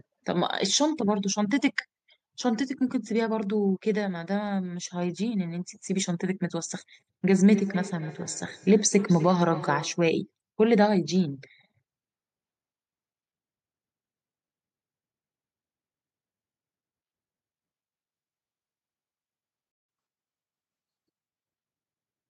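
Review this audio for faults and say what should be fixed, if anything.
From 7.48 to 10.08 s there is feedback echo between two devices: the sound returns at regular intervals of roughly 0.3 s, each pass thinner and more ringing, the loudest about 13 dB below the speech. Discrete, evenly spaced repeats set it apart from ordinary room reverberation. Only one device per room should join the call, or the second should be muted.

At 19.72 s the audio stops dead for 0.17 s, a playback stall, and resumes at 19.89 s. A brief cut that is followed by a speed-up points to the player running dry, likely a buffer underrun, rather than a gap in the recording. A larger playback buffer would prevent it.

From 19.89 to 21.58 s comes catch-up at higher speed: playback runs 1.1 times faster, with pitch raised by about a semitone and a half, then settles back. Tempo and pitch rise together and then return to normal, which distinguishes it from a steady pitch shift. 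Time-stretching that preserves pitch, or avoiding the stall, would remove it.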